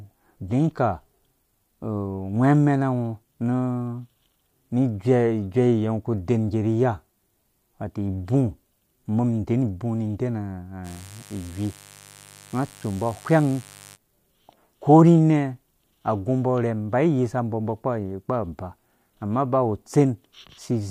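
A speech recording with mains buzz from 10.83 to 13.98 s. Switching spikes twice per cycle of the 50 Hz mains add a raspy harmonic buzz, roughly 25 dB below the speech.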